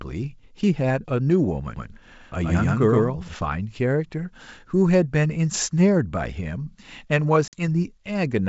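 From 1.76 to 3.34 s the speech is heard twice: a second full-band copy at about the same level trails by roughly a tenth of a second, with no decay or room colour, and it cuts in and out abruptly at those edges. That is a doubled audio track, likely from the signal being picked up a second time through a slower path, so two identical streams sum out of step.

At 7.48 s comes a different fault: packet loss on an ADPCM call. About 50 ms of audio, roughly five packets' worth, drops to hard-edged silence. Once the speech resumes, it comes back slightly distorted. It settles by about 7.61 s. The decoder's adaptive predictor and step size lost step with the sender's during the gap and need a few tens of milliseconds to recover.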